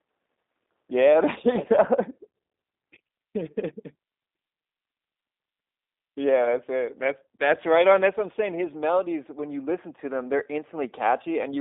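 Speech carries G.729 codec damage throughout. The spectrogram shows a hard ceiling near 3.8 kHz and a 250 Hz to 3.7 kHz band, and the voice sounds plainly rough and synthetic. It is rebuilt from a vocal tract filter, pitch predictor and sparse pulses, which fits an 8 kbit/s stream.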